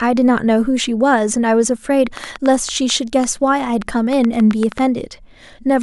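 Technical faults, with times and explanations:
2.17 to 4.80 s, train of clicks. Around fifteen sharp, similar clicks tick over the speech at about 5.4 per second, unevenly spaced. They peak roughly 10 dB above the speech and continue through pauses. Likely cause: interference or a faulty connection or power supply injecting pulses.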